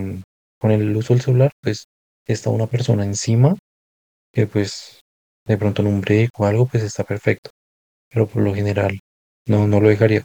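Low bit depth without dither runs throughout this speech clip, with a grainy distortion that shifts with the sound and sits around 40 dB below it. Quiet passages turn gritty or sputter, likely from rounding to about 9 bits with no dither to decorrelate the error.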